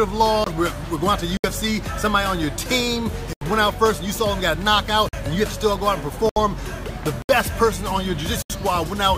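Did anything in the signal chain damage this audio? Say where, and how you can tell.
Yes. Blocks of digital silence occur at 0.44, 1.37, 3.33, 5.09, 6.29, 7.22 and 8.42 s, lasting 23, 70, 82, 46, 70, 70 and 77 ms. This is a driver or buffer fault. Each gap cuts out and returns with no fade. The short ones tick and the longer ones leave small holes. The 23 ms and 46 ms lengths fit one and two missed 1024-sample buffers, meaning the program didn't refill output in time.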